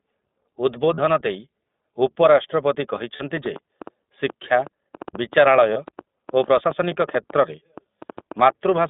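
Throughout, the speech carries the sound of the iLBC codec. The band is confined to roughly 200 Hz to 3.6 kHz, so sibilants lose their top end and the voice sounds thin and boxed-in. Each short block of excitation is coded on its own, which leaves a plainly audible roughness and a slightly synthetic edge. The texture fits the 15.2 kbps mode with 20 ms frames.

Three dropouts are concealed as lost iLBC frames, at 0.94 to 0.99 s, 3.16 to 3.22 s and 5.74 to 5.78 s. The first two span about 40 ms, consistent with two missing frames, and the last about 20 ms, consistent with one. In each, the decoder fills the gap by repeating the last pitch cycle blended with noise, heard as a brief held, faintly breathy buzz. Normal speech resumes almost immediately after each.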